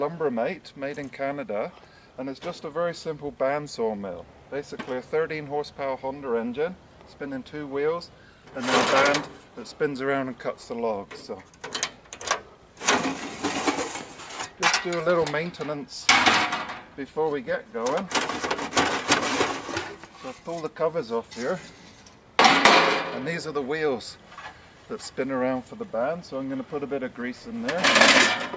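No technical faults are audible.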